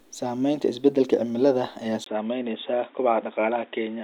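The input likely switched to a poorer device at 2.04 s, after "isbeddelka cimilada ayaa": following a 20 ms gap, the speech turns dull and boxy, with nothing above 3.8 kHz and a new noise floor roughly 35 dB down.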